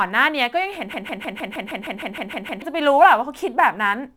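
From 0.94 to 2.62 s, a broken-record loop repeats one 155 ms fragment exactly eleven times, likely a stalled stream; unlike a stutter, the repeats are identical.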